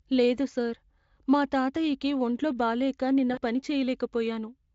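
At 3.33 s the speech smears into a drawn-out buzzy tone or coloured noise that fades away by 3.39 s. This is VoIP packet loss concealed by the speech codec. About 40 ms of audio went missing, and the Speex decoder bridged the gap by extending its last pitch and filter shape at falling gain.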